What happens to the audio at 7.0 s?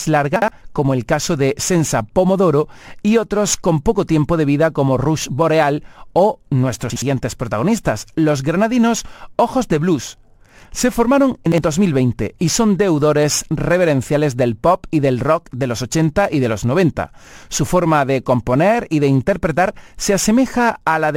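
At 6.90 to 7.02 s the speech briefly scrambles, just before "protagonistas los granadinos". This is chunks out of order. Two 60 ms blocks of audio swap places: one arrives a single chunk late and plays after the block that should follow it. No sound is lost. The order is simply wrong, and the swapped edges create three hard joins. The result is a jumbled stutter lasting about a tenth of a second.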